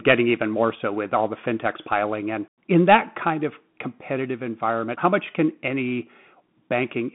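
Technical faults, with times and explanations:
Throughout, Bluetooth CVSD headset codec: the speech is confined to roughly 150 Hz to 3.5 kHz, with nothing above 3.8 kHz, consistent with 64 kbps one-bit delta coding. The adaptive step lags loud high sounds, so s sounds turn scratchy over a granular hiss.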